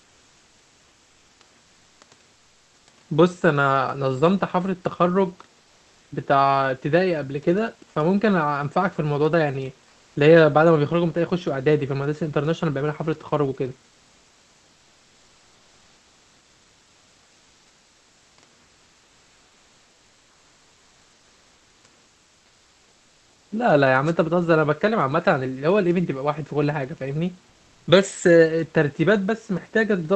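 Comfort noise stands in for the real background at 0.00–1.39 s, 2.33–2.87 s, 13.89–18.37 s, 18.63–21.83 s and 22.05–23.51 s. Likely the call's discontinuous transmission is kicking in during pauses, swapping the room's textured hiss, already about 40 dB under the loud parts, for a flat, featureless noise that's up to about 2 dB quieter.

At 24.04–24.13 s there's a wireless microphone noise hit: the radio link fades briefly and receiver noise jumps up, so you get a quick swish of static lasting about 90 ms.

The comfort noise comes back once more at 27.49–27.87 s, the same smooth, detail-free fill for under half a second.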